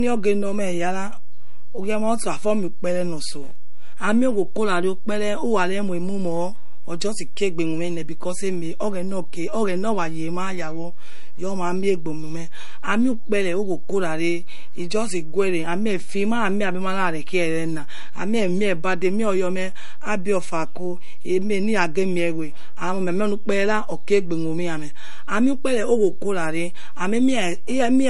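Speech, and two faults run the whole way through. First, there's a DC offset: the entire waveform sits shifted off the zero line by a constant amount. You won't hear it as such, but it eats into headroom on one side and shows up as a steady lump of energy at the very bottom of the spectrum, so peaks will hit the ceiling sooner than they should. Second, the top end is simply gone, with nothing above 11.2 kHz anywhere in the file, and the speech carries that smeared, swirly coding texture you get from a starved MP3. Despite the generous container, this is most likely low-bitrate audio saved at a high bitrate: a file squeezed hard once, which fits something around 48 kbit/s, then re-encoded at something like 192 kbit/s. The second pass adds size but can't bring back the band or detail the first one threw away.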